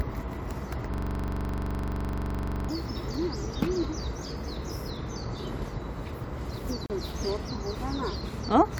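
Everyday sounds, with two timing faults. From 0.94 to 2.69 s a system hang loop repeats one 42.7 ms slice about forty times, a 23.4 Hz machine-gun stutter that fits a 2048-sample buffer cycling while the system froze. Roughly two seconds of audio is lost, and a spectrogram shows identical vertical stripes at even spacing. At 6.86 s a gap between stream segments leaves a 36 ms hard-edged silence, a near-flat line in the waveform and a blank column in the spectrogram, where two segment time stamps, fitting 4-second segments, fail to meet.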